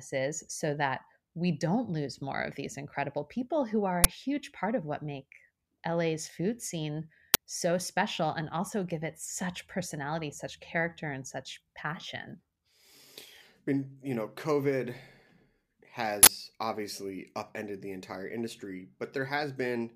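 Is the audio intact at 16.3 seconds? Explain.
No. From 16.23 to 16.27 s, just before "obviously upended the entire", an uninitialised buffer plays a 40 ms block of leftover memory, a loud digital noise burst unlike a soft dropout gap.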